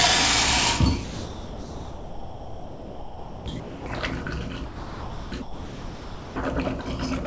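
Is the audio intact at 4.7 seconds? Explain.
No. From 4.66 to 5.32 s, about 0.66 s of the sound is gone, replaced by a steady comfort-noise hiss. This is likely sound dropped by the voice detector: the sender judged it background, stopped transmitting, and the receiver filled the gap until sending resumed.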